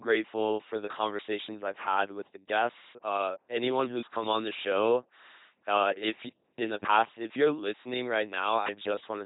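From start to finish the speech comes through an LPC-10 vocoder, heavily damaged: each moment gets either a buzzy pulse train or noise through a small vocal-tract filter, so it sounds robotic and mechanical, with nothing above 3.9 kHz. The sound fits a 2.4 kbit/s stream.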